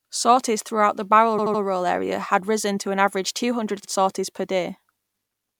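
A run of compressed frames was delivered more than once, so the decoder replays the same slice of speech. These repeated frames stutter at 1.37 to 1.61 s, where a 78.4 ms block (which fits a run of about three frames) plays three extra times, adding 235 ms. They stutter again at 3.83 to 3.88 s, between "an average two hundred" and "sorties per", where a 52.2 ms block repeats once.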